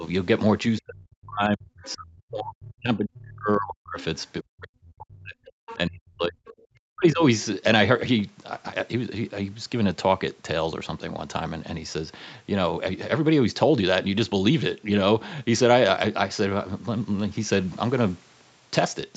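Speech suppressed in double talk at 0.0 to 0.05 s, 0.78 to 3.98 s and 4.43 to 7.23 s. The talker's level drops by about 10 dB in the first brief dip and by up to about 40 dB in the longer stretches. This is likely the echo canceller turning everything down while both sides talked at once.

Other side's voice leaking through at 1.83 to 1.95 s, 4.0 s, 5.68 to 5.75 s and 6.47 s. These are faint scraps of a second voice, about 20 to 30 dB below the speech, likely where loudspeaker echo slipped past the canceller.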